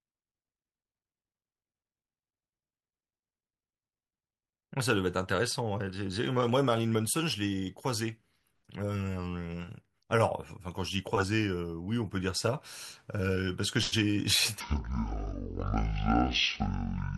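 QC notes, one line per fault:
14.60–17.18 s: section at the wrong speed. Speech runs at 0.5x, about ten semitones lower, turning deep and slow, likely from being played against the wrong clock.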